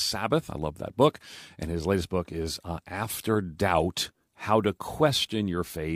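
Nothing stood out on listening to this speech recording.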